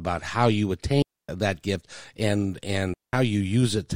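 At 1.02 s, right after "how you", the speech drops into a clean hole of near silence for about 0.26 s, picking up again at "gift and". Then at 2.94 s, just after "gift and", it happens again for about 0.2 s. That's a digital wireless dropout: the link lost too much data, so the receiver muted with a quick fade, and there's no noise burst on either side.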